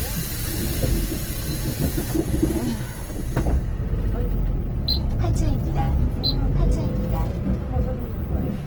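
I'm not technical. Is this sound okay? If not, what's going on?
No, there's a rough, grainy texture on the sound the whole way through, most likely from Opus compression squeezing it into too little data.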